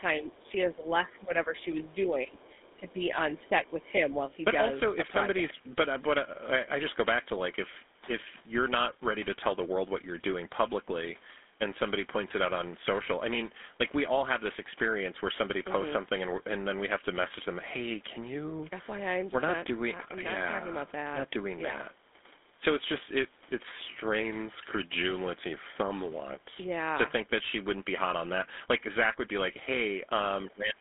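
Throughout, the sound is buzzy and gravelly, confined to roughly 250 Hz to 3.6 kHz with nothing above 3.8 kHz. This is the GSM full-rate codec's pulse-driven vocal-tract model at 13 kbps.

From 0.0 to 2.4 s the speech dips by around 10 dB in patches, and again from 2.75 to 3.76 s. At the very end, from 30.5 s, it drops by about 25 dB. This is speech suppressed in double talk, likely the echo canceller turning the talker down while both sides spoke.

A faint second voice, some 30 dB below the speech, comes through at 0.31 to 0.52 s, 1.57 to 1.95 s and 2.41 to 2.93 s. This is the other side's voice leaking through, likely loudspeaker echo the canceller left in.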